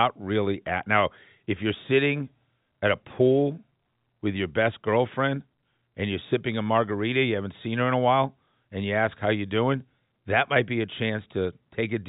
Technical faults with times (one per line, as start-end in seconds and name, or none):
none